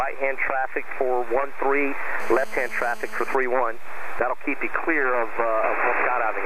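From 2.20 to 3.35 s a GSM phone buzz cuts in: a nearby 2G handset in a call pulses at 217 Hz, and the audio circuit rectifies those pulses into a hard, raspy drone about 21 dB below the signal. A spectrogram shows evenly stacked harmonic lines every 217 Hz.

From 3.43 to 4.40 s come GSM signalling bursts, heard as even ticks with a longer 217 Hz buzz twice a second, roughly 35 dB down. The phone is still in the call, but its user is silent, so it transmits only in short clusters. The waveform shows grouped spikes, and the spectrogram shows broken vertical bands.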